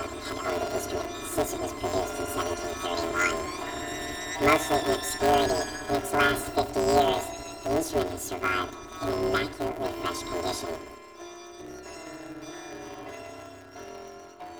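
Throughout, planar audio is read as interleaved: each short block stores all left samples then all right, but playback treats them as alternating pairs. The roughly 5.8 ms blocks, which fits 256-sample blocks, produce a robotic buzz at about 172 Hz, without an obvious octave shift.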